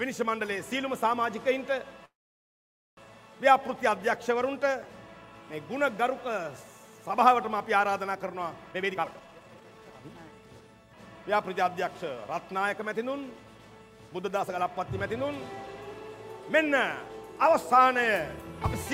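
A call audio freeze runs from 2.05 to 2.99 s. The sound stops abruptly, and after a very brief carried-over tail the gap is almost entirely silent for about 870 ms. When the audio returns it picks up exactly where it left off, so nothing is lost; the pause has simply been inserted, adding roughly 0.92 s of delay. The likely cause is packets held up in transit, which left the jitter buffer empty until they arrived.

A jitter buffer speed-up follows from 8.71 to 10.69 s. Here the receiver found itself holding more audio than it wanted and trimmed the excess by cutting out many short, pitch-period-sized slices in quick succession. The passage plays at about 147% of normal speed while the pitch stays unchanged, so it sounds hurried and compressed. Around a second of audio is removed across that stretch.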